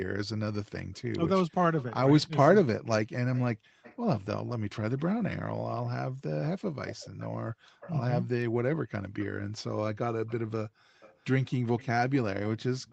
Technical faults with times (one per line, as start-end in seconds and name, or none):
0.93-5.00 echo leak
3.55-3.81 background gated by the echo canceller
6.42-7.94 echo leak
7.53-7.80 background gated by the echo canceller
10.28-12.92 echo leak
10.69-11.00 background gated by the echo canceller